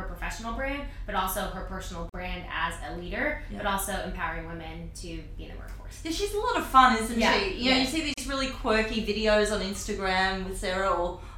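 At 2.09 s and 8.14 s, gaps at a join of encoded pieces cut the sound for 44 ms and 37 ms, six seconds apart. Untrimmed encoder delay and end padding leave near-flat waveform stretches, seen as blank vertical strips across every spectrogram band.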